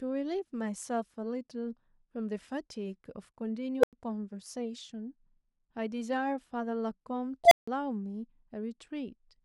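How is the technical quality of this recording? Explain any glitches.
The speech is broken twice by an unstable filter. At 3.79 to 3.93 s a tone of roughly 500 Hz swells over 42 ms into a loud squeal, then drops to silence for 93 ms. At 7.44 to 7.68 s a tone near 700 Hz builds over 75 ms and is followed by 163 ms of silence. A recursive filter with bad coefficients feeds its output back with growing gain until it clips and overflows, then resets. On a waveform each event is an exponentially widening envelope slamming into clipping, then a flat gap. A spectrogram shows a bright horizontal line at one frequency, then a blank column.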